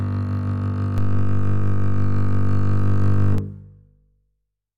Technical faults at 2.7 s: DC step

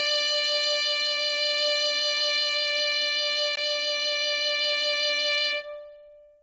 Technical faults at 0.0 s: Bluetooth LC3 compression

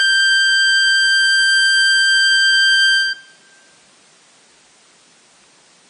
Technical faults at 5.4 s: MP3 compression

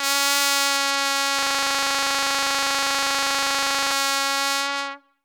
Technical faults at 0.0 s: none

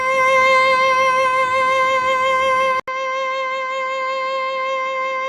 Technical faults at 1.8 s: none

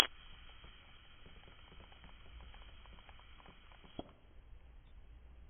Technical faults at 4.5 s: AAC compression

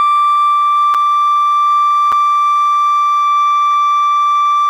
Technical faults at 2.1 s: block of digital silence

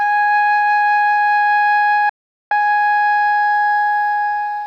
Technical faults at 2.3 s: digital broadcast dropout

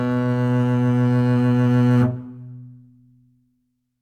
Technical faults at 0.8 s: none

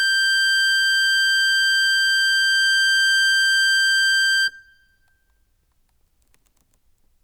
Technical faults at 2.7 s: none

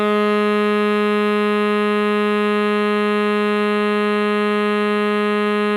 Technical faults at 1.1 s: none

